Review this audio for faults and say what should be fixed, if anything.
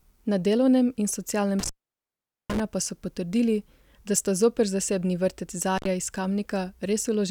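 The speech suffers an intermittent contact fault twice: from 1.59 to 2.60 s, just after "delovnem in", the line is open for about 0.80 s, and again from 5.76 to 5.87 s for 74 ms. A loose plug or cable conductor briefly loses its connection, so the signal vanishes with crackle as the contact breaks and remakes. Unlike a digital dropout, which falls to clean silence with abrupt edges, these gaps have scratchy boundaries and faint hiss underneath. Reseat or replace the suspect cable and connectors, and secure them with strain relief so they cannot shift during recording.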